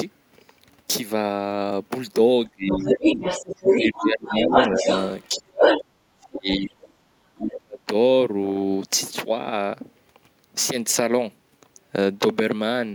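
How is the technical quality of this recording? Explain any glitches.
Not great: there's an echo-canceller tangle between about 2.5 and 7.8 s.

Speech suppressed in double talk at 2.52–3.04, 3.75–4.87, 5.28–6.72 and 7.36–7.8 s: the talker dips by roughly 20 to 40 dB, likely because the canceller ducked everything during overlap.

The other side's voice leaks through from 2.68 to 5.24 s and at 5.61–5.8 s, around 5 dB louder than the talker, then faintly at 6.49–6.91 s. That's likely uncancelled loudspeaker echo.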